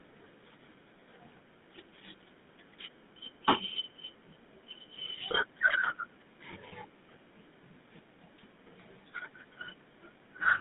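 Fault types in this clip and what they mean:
GSM full-rate codec: The whole clip has that old GSM phone sound. The codec models the vocal tract and feeds it a pulse train that keeps only a fraction of the excitation, so the speech comes out buzzy and gravelly, and the damage is plainly audible. The band is squeezed to roughly 150 Hz to 3.7 kHz, so there's no air on top, and the texture fits the 13 kbps full-rate mode.
Lost GSM frames: At 6.68 s, through about 6.73 s, there's a short dropout where the decoder had nothing good to play. Instead of going silent, it reused the last good frame's settings, so you hear a brief rough, metallic ring for about 40 ms, which fits two lost 20 ms frames. It's over too quickly to fade all the way down before normal decoding picks up again.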